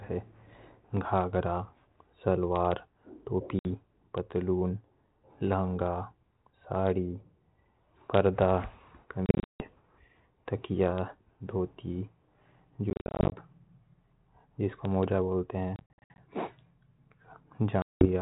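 At 3.59 to 3.66 s, 9.26 to 9.67 s, 12.90 to 13.34 s, 15.76 to 16.22 s and 17.82 to 18.10 s, the speech drops out from packet loss on an ADPCM call, carried on 32 kbit/s G.726. The gaps are a single 60 ms hole at 3.59 s, bursts of 250 to 280 ms spread over 340 to 420 ms in the middle three, and 190 ms at the end. Lost audio becomes hard-edged digital silence: flat-line gaps in the waveform and blank vertical columns on a spectrogram. Because the decoder's prediction and step size lose step with the sender's, speech resumes with slight distortion that settles within tens of milliseconds.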